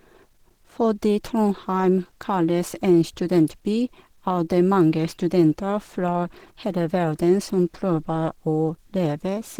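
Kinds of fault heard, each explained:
Opus compression: Throughout the speech there is a muffled, hoarse quality, with grainy, noisy texture replacing clean upper harmonics. This is the sound of Opus, likely in its hybrid mode, where a speech coder handles the low band and the upper bands are rebuilt from band energies and filled with noise. The damage is plainly audible and fits a bitrate near 16 kbps. On a spectrogram, content still reaches about 20.3 kHz, but the upper bands look smeared and noise-like rather than showing distinct harmonic lines.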